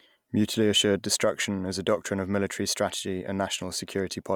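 No technical faults occur at any point in the speech, so there is nothing to describe in time order.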